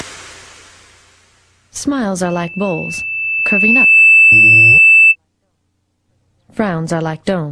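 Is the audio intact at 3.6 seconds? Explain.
No. At 3.6 seconds a piercing single tone near 2.6 kHz is swelling over the sound, rising for roughly two seconds to sit well above it, about 15 dB louder. This is loudspeaker feedback squeal, from 2.25 to 5.16 s: the microphone re-amplifies its own loudspeaker until that frequency runs away.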